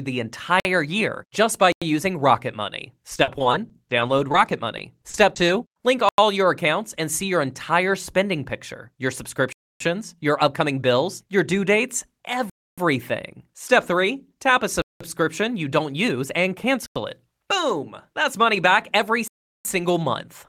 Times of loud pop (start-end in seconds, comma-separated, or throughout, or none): none